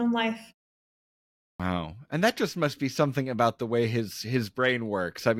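The output device slept through the 1.1 s pause and woke late, a clipped start after a pause at 1.56 to 1.60 s. About 36 ms of speech is lost, so it starts abruptly without its opening sounds.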